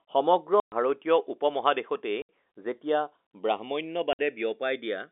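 Right from the start the two channels are drifting apart, with a clock mismatch of roughly 150 ppm sliding the delay toward half a millisecond, so a mono sum gives slow flanging. Then there's packet loss filled with silence: hard-edged holes at 0.6 s (120 ms), 2.22 s (70 ms) and 4.13 s (60 ms), lengths that fit 10 ms packets, all over a narrow G.711 telephone band.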